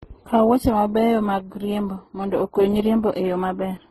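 From start to finish the speech carries a smeared, grainy coding sound with several kinds of artefact stacked on top of each other, and nothing above 12.3 kHz. That points to transcoding between lossy codecs, likely very low-bitrate stages ending in MP3, each one re-encoding the last one's damage.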